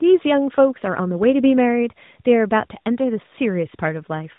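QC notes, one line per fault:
Throughout: tandem speech coding. The speech sounds rough, muffled and warbly, with nothing above about 3.8 kHz. It was coded by G.726 at 32 kbit/s, passed over G.711 A-law, then re-coded by AMR-NB at 12.2 kbit/s, so the second codec compounded the first's damage.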